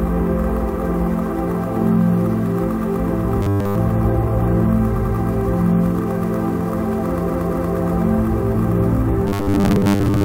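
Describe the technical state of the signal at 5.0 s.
At 5.0 s the signal has repeated frames, from 4.95 to 5.13 s. A 92.9 ms stretch of the compressed stream was decoded and played twice more, which points to a short run of frames being written or sent again, adding 185.8 ms to the audio. It sounds like a quick stutter. On a waveform the same 92.9 ms shape appears three times in a row, and a spectrogram shows an identical block of texture tiled back to back.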